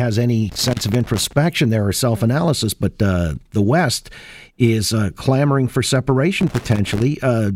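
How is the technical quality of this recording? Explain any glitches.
The recording is marred by two bursts of loose connector crackle, from 0.49 to 1.33 s, ending just before "there or self analysis", and from 6.41 to 7.02 s, after "is uh clamoring for". A worn contact rapidly making and breaking chops the signal into irregular scratching.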